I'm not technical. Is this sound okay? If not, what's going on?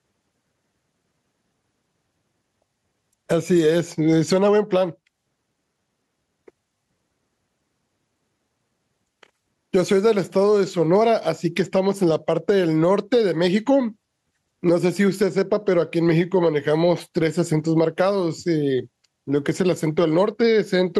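No, there's an issue running through the whole clip called gain pumping. The likely cause is the microphone level set far too high, with an automatic limiter or compressor yanking it down on every loud sound. That pull-down is quite large here, and it leaves the speech sounding squashed and flat.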